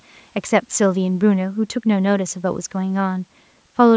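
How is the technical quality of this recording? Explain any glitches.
Nothing in this speech recording stood out on listening, and the call microphone processing it passed through behaves as expected, with the lowest bass trimmed and no content above 8 kHz.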